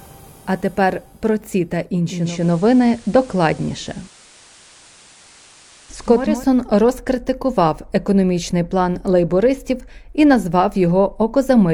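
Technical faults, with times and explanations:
2.02–6.46 s: digital radio blending to analogue. The receiver loses the digital stream and cross-fades over 481 ms to the station's FM broadcast, then blends back at 6.46 s. On the FM path a steady hiss sits roughly 30 dB below the programme, and the level shifts by about 4 dB, since the two paths are not matched in loudness.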